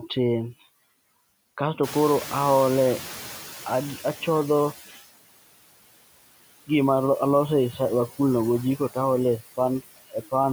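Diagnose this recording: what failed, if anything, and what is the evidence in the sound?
Noise suppressor artifacts throughout, a call-processing fault: the suppressor lowers steady noise by about 17 dB frame by frame, so the noise sinks between the words and rises under them.

Noise suppressor catching up, 1.83 to 4.85 s: the room noise jumps around 2 s, and the suppressor's estimate needs about 3 s to adapt before reaching about 12 dB of reduction.

Speech cut by the noise suppressor, 9.88 to 10.33 s: the suppressor mistakes roughly 150 ms of speech for noise, dipping it by up to about 21 dB so it sounds swallowed.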